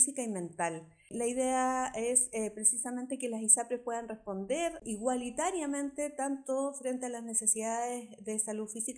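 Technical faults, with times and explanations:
No technical faults are audible.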